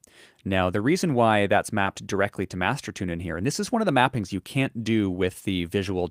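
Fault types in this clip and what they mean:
Short concealed packet loss: a brief smear near 1.83 s where about 20 ms went missing and the receiver extended the preceding sound to bridge the gap.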